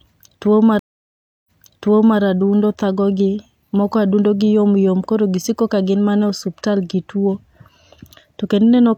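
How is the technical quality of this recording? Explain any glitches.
The recording has one glitch. From 0.79 to 2.20 s, the speech drops into about 0.67 s of silence, then picks up again roughly 0.74 s earlier, repeating material starting with "adundo thagogi moko". This is a stream reconnect: the connection broke, the player reconnected, and the server resent a burst of audio.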